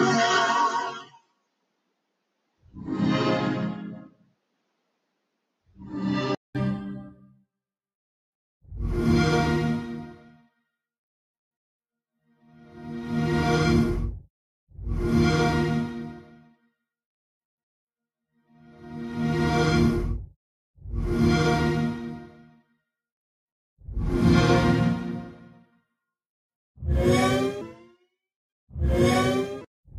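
From the start to 6.55 s the input likely switched to a poorer device: a narrower band, about 5 dB quieter, and a new noise floor roughly 30 dB under the signal, so the sound is dull and boxy, with a 200 ms silence at the switch. Within that stretch the noise suppressor cut sound it mistook for noise, at 0.99 to 2.11 s, 2.40 to 2.69 s and 4.09 to 5.26 s, pulling parts of it down by up to about 22 dB so that they sink in level.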